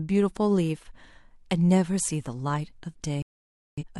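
At 3.22 s the speech cuts to silence in a digital broadcast dropout. The receiver stopped getting good frames and muted. Sound returns at 3.83 s, later in the programme. Roughly half a second of audio is simply gone.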